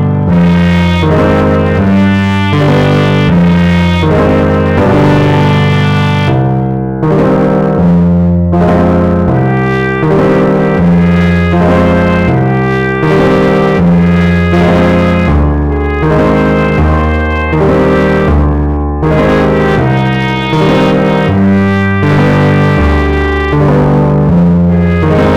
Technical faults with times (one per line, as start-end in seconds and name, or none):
0.00-25.37 hard clipping